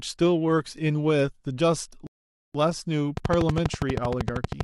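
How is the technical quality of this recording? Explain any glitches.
Two glitches mar the technical quality of this speech recording.

From 2.07 to 2.55 s the audio drops to silence, then picks up exactly where it stopped. This rebuffering stall happened because the player ran out of downloaded audio, adding about 0.48 s without losing anything.

From 3.17 to 4.62 s a train of clicks ticks steadily over the speech, around twenty of them at 12.6 per second, standing well above the speech level. The likely cause is electrical interference or a faulty connection or power supply injecting regular pulses.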